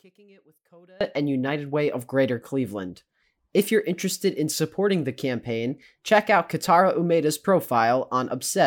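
Right at the start, from 0 to about 1.01 s, the speech drops sharply, roughly 31 dB down, leaving just a faint trace before it snaps back to full body. That points to one channel inverted, likely: with one side's polarity flipped, everything the two channels share cancels out when they're folded to mono, so the centred voice and its low end almost disappear and only the small left-right differences remain.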